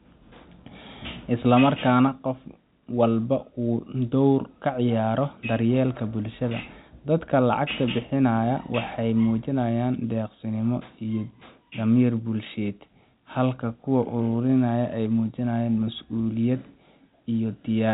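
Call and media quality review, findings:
No findings for this call and media quality review; the speech comes through the G.711 telephone path as expected.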